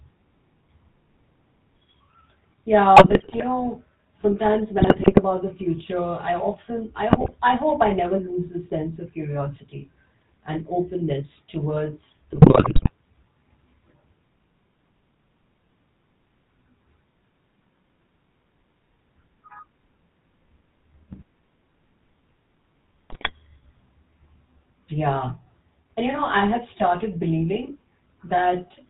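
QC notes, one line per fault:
Throughout, GSM full-rate codec: the speech has a steady buzzy, gravelly roughness, heaviest on higher-pitched sounds, with nothing above 4 kHz, which fits 13 kbps full-rate coding. The codec models the vocal tract and excites it with sparse, regularly spaced pulses, discarding most of the fine excitation detail, so the grit is constant and uniform. Unlike bit errors, it never flares up or changes level.
2.96–3.43 s, 4.78–5.21 s, 7.09–7.35 s, 12.32–12.91 s, 21.12–21.19 s and 23.10–23.31 s, GSM bit errors: bursts of squawks, pops and gargling. The first ends just before "know sometimes", the second follows it, and the third falls between "often I" and "I hope I never". Corrupted filter, pitch or gain values warp the spectrum or spike the level frame by frame. These are brief, erratic bursts, unlike the codec's steady roughness.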